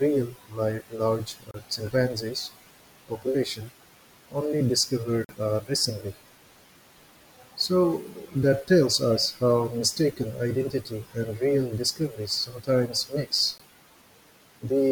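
Bluetooth dropouts at 1.51–1.55, 5.25–5.34 and 13.58–13.60 s: the speech cuts abruptly to silence and resumes further along, likely from packets reaching the headphones too late.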